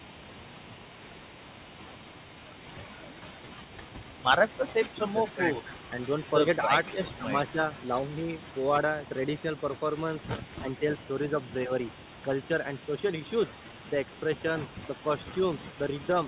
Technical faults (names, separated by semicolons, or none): echo leak; speech suppressed in double talk